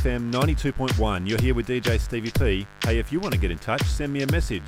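A steady, raspy mains buzz runs under the sound from start to finish, sitting roughly 25 dB below it. Switching spikes from a dimmer, rectifier or unshielded line arrive twice per 50 Hz cycle, spreading harmonics up into the kilohertz range.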